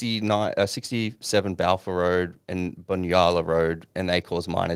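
No technical faults can be heard in the speech.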